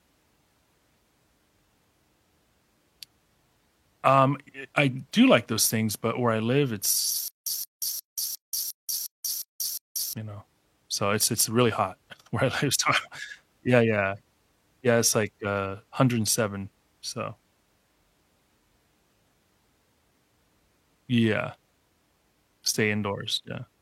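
Stutter with silent gaps from 7.28 to 10.13 s in this speech: a 172 ms fragment repeats eight times with 184 ms silences between, likely a stalled stream replaying its last buffer.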